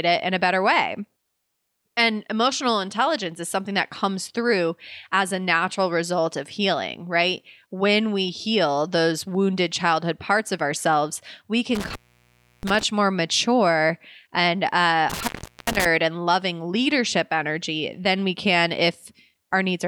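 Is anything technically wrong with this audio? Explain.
Yes. Intermittent contact occurs twice. A loose cable or plug briefly loses its connection, so the signal drops out, with crackle as the contact breaks and remakes, and faint hiss during the gap. The first break runs from 11.75 to 12.83 s, after "parts of ourselves we", with the line open about 0.68 s. The second runs from 15.10 to 15.86 s, after "more mature and uh", with the line open about 0.39 s.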